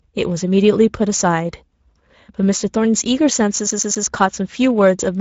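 Right from the start the speech carries Speex codec damage, and it's plainly audible: a hoarse, grainy texture where the codec hasn't enough bits to rebuild the excitation cleanly, which fits a middling rate around 17 kbps. Nothing survives above 7.6 kHz, and the top band sounds like shaped noise.

Then from 3.71 to 4.07 s you get the CD stuck on one turn effect. A scratch keeps throwing the laser back to the same spot, so a 0.12 s slice replays three times, each jump marked by a tiny mute. It's that quick, even skipping-disc stutter.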